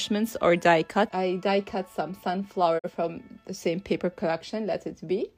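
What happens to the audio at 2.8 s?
The sound quickly fades out over about 20 ms and drops to silence from 2.78 s to 2.90 s, with roughly 43 ms of programme lost. This is a digital broadcast dropout: the receiver muted when a frame failed, which points to one corrupted frame.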